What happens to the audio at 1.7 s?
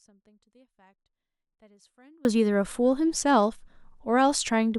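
The signal path likely lost its feed while staying live, an audio dropout to a faint residue from the start until 2.25 s, leaving only a faint leak far below normal level.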